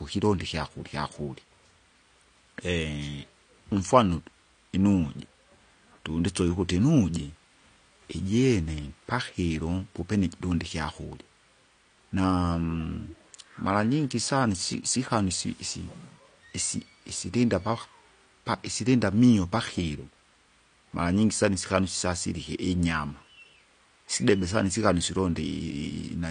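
Throughout, the speech sounds dull, with nothing above 9.7 kHz and fizzy, warbling sibilants that a plain low-pass wouldn't give: likely AAC compression at a low bitrate.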